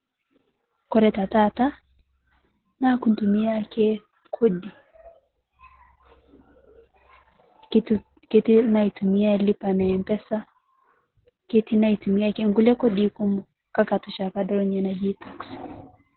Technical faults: Opus voice compression

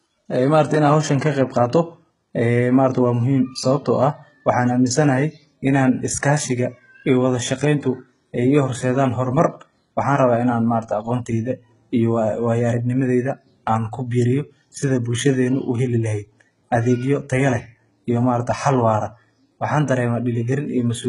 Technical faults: HE-AAC compression

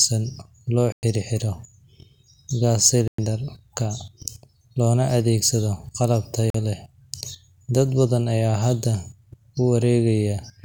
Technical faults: Bluetooth dropout

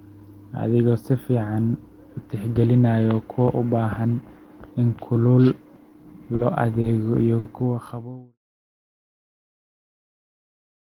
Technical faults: short stall from a late packet

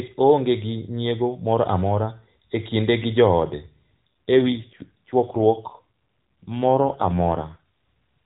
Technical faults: AMR rate drop

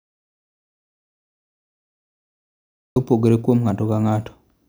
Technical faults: audio dropout to silence

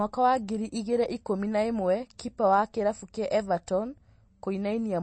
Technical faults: MP3 compression; pre-echo

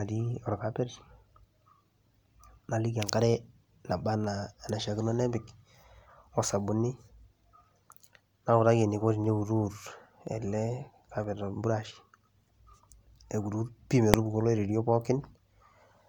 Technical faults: dropped samples; invalid numbers at full scale

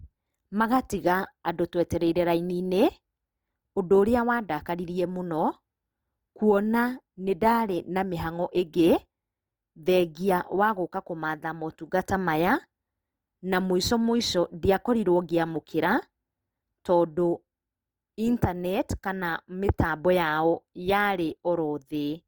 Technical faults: Opus compression

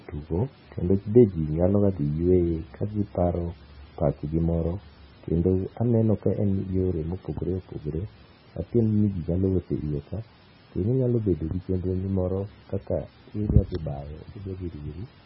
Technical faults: MP3 compression

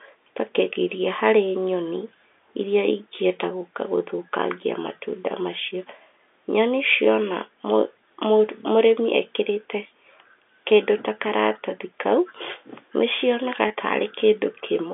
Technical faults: packet loss with pitch repetition

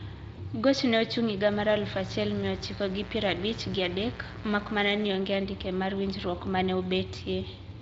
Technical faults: VoIP packet loss concealed by the speech codec; mains buzz

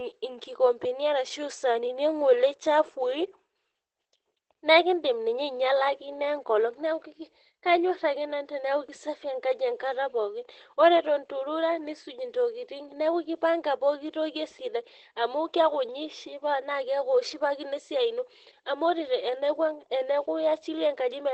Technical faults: Opus voice compression

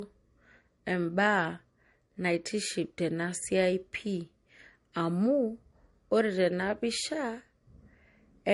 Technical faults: transcoding between lossy codecs

